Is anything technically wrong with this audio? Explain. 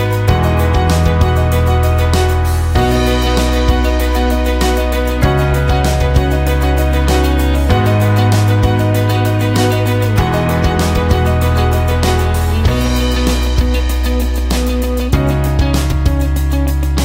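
No, nothing stood out as technically wrong on listening to this audio.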